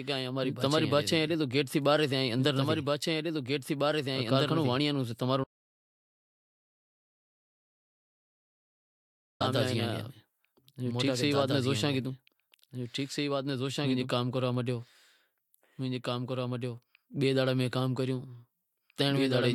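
A speech recording with a doubled audio track running throughout: a second full-band copy sits roughly two seconds behind the original and about 5 dB quieter, with no decay or room colouring, so every phrase is repeated as a dry, slightly weaker echo. This likely comes from the signal being captured again through a slower path or from two misaligned copies left in an edit. There is also an audio dropout to silence from 5.44 s to 9.41 s, immediately after "کارخانو وانڑایاں رو سے". The sound cuts off mid-flow, and for nearly 4 s there is only silence with no room tone. That content is lost. The likely cause is a loss of input, such as a disconnected device, a failed link or a stray mute, while recording continued.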